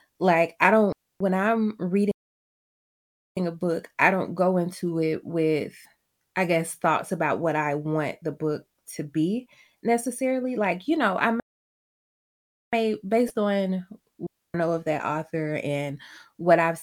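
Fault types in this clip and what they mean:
digital wireless dropout: the receiver in a digital radio link stops getting enough usable data and mutes its output behind a very quick fade instead of passing corrupted audio. In this speech clip it leaves two clean gaps of near silence, each about 0.28 s long, at 0.92 s and at 14.27 s, the second ending just before "know of that author". Neither gap has any burst of noise on either side, which marks it as a muted receiver and not a failing analogue path.
playback stall: the audio stops in mid-flow and stays silent for over a second, then resumes. The likely cause is a player that ran short of buffered data or had its audio thread held up until it recovered. The first stall runs from 2.11 to 3.37 s, about 1.25 s, with speech resuming on "a book I don't". The second runs from 11.40 to 12.73 s, about 1.33 s, cutting in right after "you know I".
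damaged data in a compressed stream: a stretch of the encoded stream arrived wrong, so the decoder cannot parse those frames, loses its place and hunts for the next valid frame header. In this clip that shows as two short glitches of roughly 40 ms each, at 5.82 s and at 13.26 s. Each one is heard as a brief glitch that breaks the continuity of the speech.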